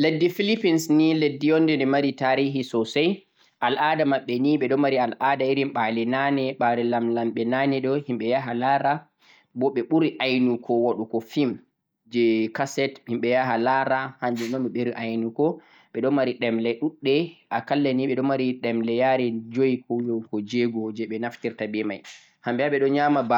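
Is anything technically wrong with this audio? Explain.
No, nothing technically wrong can be heard here.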